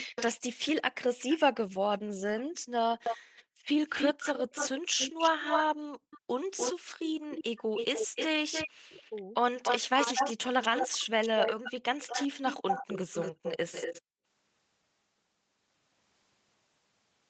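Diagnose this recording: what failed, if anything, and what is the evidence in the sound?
The echo canceller in the call processing let an echo leak through: a delayed copy of the speech trails it by about 394 ms from 0.0 to 0.23 s, then by about 294 ms from 1.18 to 14.02 s, likely residual loudspeaker pickup. A fixed lag, unlike reverb's smeared decay.

The background is gated by the echo canceller at 3.18 to 3.67 s, 5.98 to 6.88 s and 14.02 to 14.25 s. The room sound drops by about 40 dB for a few hundred milliseconds, then returns abruptly. This is a switched gate, not a codec dropout, because the sound recovers cleanly rather than smearing.

Speech is suppressed in double talk between 8.81 and 10.54 s. The talker's speech dips by roughly 40 dB in pieces, totalling under a second, likely because the canceller mistook overlapping speech for echo. Unlike packet loss, the drops track the other side's speech, and there are no codec fill-in artefacts. 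The Opus path at 20 kbps keeps its normal 8 kHz limit throughout.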